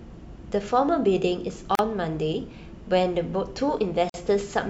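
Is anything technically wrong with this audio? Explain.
Yes. The speech has two gaps at joins of encoded pieces: 1.75 to 1.79 s (37 ms) and 4.10 to 4.14 s (46 ms). Separately encoded segments were joined untrimmed, leaving encoder delay and end padding as silence. The sound drops out, its edges smeared, then resumes where it stopped.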